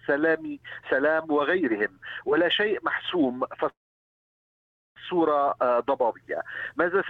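At 3.69 s the audio stops moving forward and does not resume until 4.98 s. This is a call audio freeze. The last sound is held briefly, then dies away, leaving about 1.2 s of silence. Nothing is lost. When the audio resumes it picks up exactly where it stopped, now running about 1.27 s late. The likely cause is packets delayed in transit, so the jitter buffer ran dry and the receiver filled the wait.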